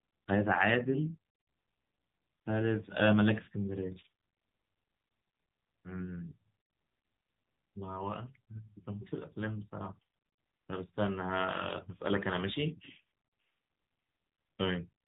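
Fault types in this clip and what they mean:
AMR narrowband mobile codec: the speech carries the sound of a 2G/3G phone call, with nothing above 4 kHz and a plainly buzzy, synthetic tone that fits a lower mode near 8 kbps. Unlike a simple low-pass filter, what remains sounds rebuilt, not merely dulled.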